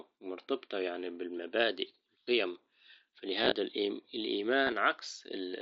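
This is speech over a Bluetooth headset, with the wideband mSBC link's light graininess on loud sounds. Concealed Bluetooth headset packet loss shows up three times. At 2.24 to 2.27 s about 30 ms goes missing and is papered over by repeating the best-matching bit of the preceding waveform. Around 3.42 to 3.52 s short scattered gaps barely register. At 4.65 to 4.72 s a longer run of about 22 ms gives a brief buzzy, held tone before the audio warbles back in.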